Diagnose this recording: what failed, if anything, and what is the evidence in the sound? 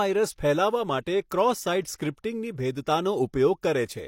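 The transform codec failed to contain its quantisation noise around sharp attacks. It spread noise sized for the loud onset across the whole block, including the quiet lead-in. The result is pre-echo, a brief hiss smearing attacks in the speech at 1.29 s (about 16 ms) and from 1.96 to 2.0 s (about 35 ms).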